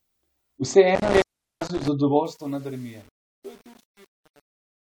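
From 0.95 to 1.88 s the speech drops out with crackle at the edges of each break. One gap lasts about 390 ms, leaving faint hiss on the open line. This is intermittent contact: a loose cable or plug briefly losing its connection.

From 2.04 s the fade-out, which starts around 2 s, turns gritty. From 2.27 s to the end at 4.9 s the grit is at its worst. This is truncation distortion on the fade: the level stage keeps too few bits, consistent with 8-bit resolution, and adds no dither, so the quiet tail collapses into coarse square steps.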